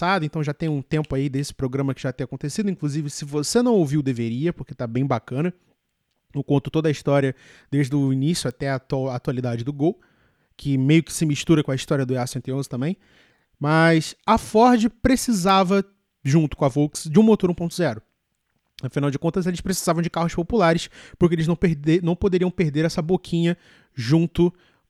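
At 8.51 s and again at 15.49 s, a bit error spike gives one sharp tick: a flipped bit throws one sample, then two, by a power of two, peaking near about -21 and about -15 dBFS. Waveforms show lone needles; spectrograms show thin full-height vertical lines.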